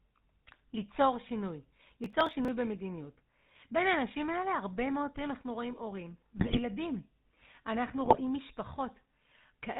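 The whole clip carries the sound of the GSM full-rate codec. The damage is plainly audible. The speech has the buzzy, gravelly roughness of this coder, which fits 13 kbps full-rate GSM. The codec models the vocal tract and excites it with evenly spaced pulses, keeping only every third excitation sample. Nothing above 4 kHz gets through, so the top of the speech is missing.

From 2.04 to 2.48 s there is processor overload crackle. The processor could not finish its small audio buffers on time, again and again. The gaps point to buffers of around 5 ms, with roughly ten of them missed. Each missed buffer was skipped, leaving a tiny hard-edged gap. Strung together, these gaps make a burst of gritty crackle over the speech. It stops when the load passes.

Two patches of GSM bit errors follow, from 6.37 to 6.60 s and from 8.04 to 8.21 s. Flipped bits from a weak link reached the decoder. The damage fits an error rate of a few percent, spread over about ten frames in the first patch and about eight in the second. 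Corrupted filter, pitch and gain values bend the spectrum and throw the level around, frame after frame. The speech breaks into squawks, pops and gargling.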